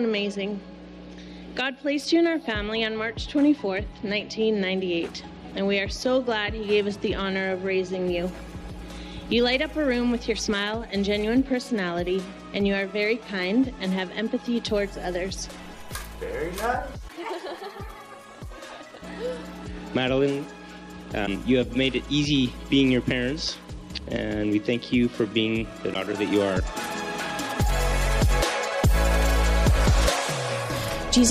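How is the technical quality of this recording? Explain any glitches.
The recording has four brief glitches, at 10.46–10.49 s, 17.07–17.10 s, 21.25–21.28 s and 25.93–25.96 s. Each is a sudden break where the sound skips ahead. The likely cause is a broken MP3 bit reservoir. After a cut, the decoder reads borrowed bytes from the wrong frame, producing roughly one 26 ms frame of garbage.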